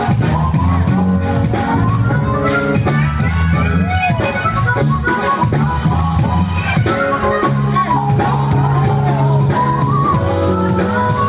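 From start to finish, the level swells up whenever the sound drops away and sinks back each time something loud arrives, a breathing, see-sawing level that moves by about 5 dB. Loud and quiet moments sit unnaturally close together, giving a flattened, squashed quality. This is gain pumping, likely from input gain set far too high with a fast limiter or compressor clamping down on every peak and releasing in the gaps, all heard through a narrowband call path with nothing above 4 kHz.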